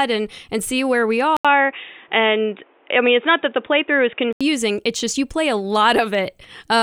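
After "and see where we", at 1.37 s, the speech drops out for 80 ms. It then turns dull and boxy, with nothing above 3.7 kHz and a faint new background noise. Loudness stays about the same. It clears at 4.41 s. The likely cause is an input switched to a poorer device.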